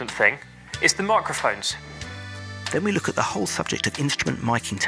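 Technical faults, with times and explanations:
No technical faults can be heard anywhere in the audio.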